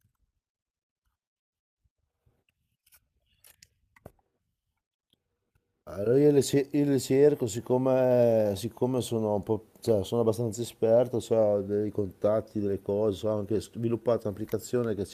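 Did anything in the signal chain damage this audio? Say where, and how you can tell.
Yes. Clock drift between sender and receiver at the jitter buffer: the sender runs roughly 1.5 percent slow, leaving small, unevenly spaced seams across the waveform.

Repeated timing corrections, 0.06 to 15.0 s, repeat short slices, visible as duplicated spectrogram columns, slowing playback to 98 percent and adding about 0.3 s.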